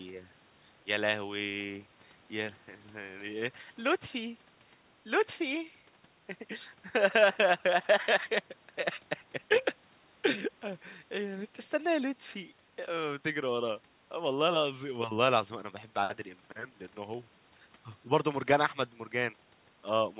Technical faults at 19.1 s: none

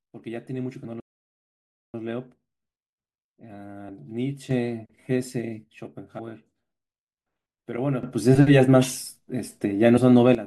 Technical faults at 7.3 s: none

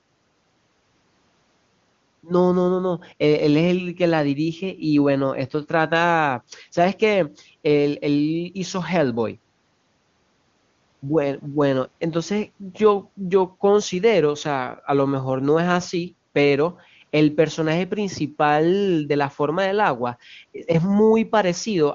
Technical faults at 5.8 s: none

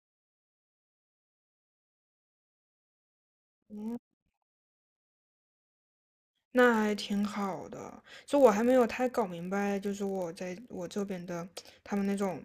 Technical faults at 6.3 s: block size mismatch (padded)

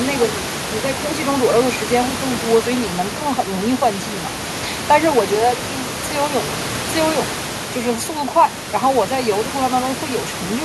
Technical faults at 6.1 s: none

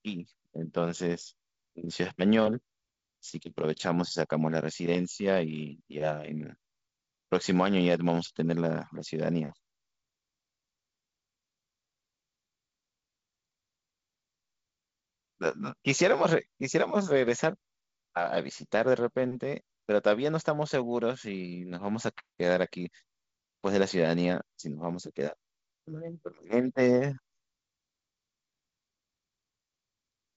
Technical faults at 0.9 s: none

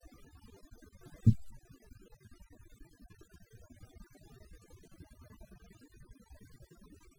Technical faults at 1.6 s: overdone noise removal

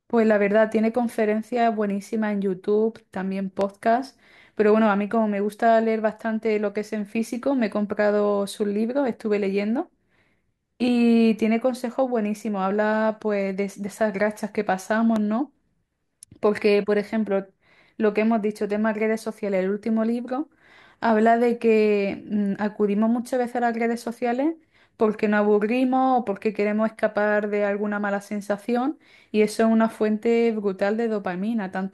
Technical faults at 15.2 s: loud pop

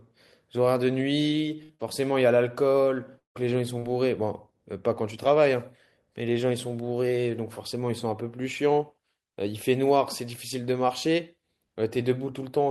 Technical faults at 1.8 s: burst of packet loss; short concealed packet loss; lost packet rebuilt from error correction

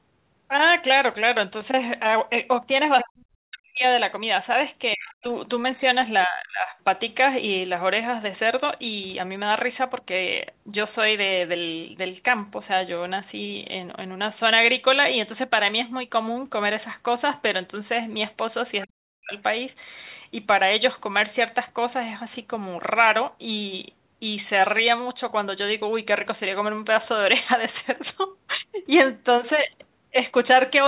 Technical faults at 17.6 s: none

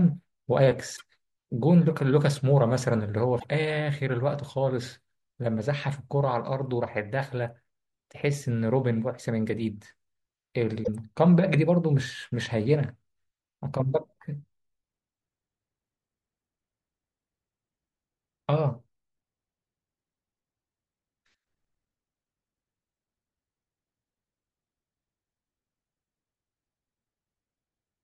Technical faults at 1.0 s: broken MP3 bit reservoir

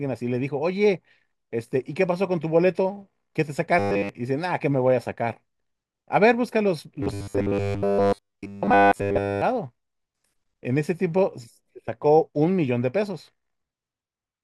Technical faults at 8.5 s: robotic sound from repeated short buffers

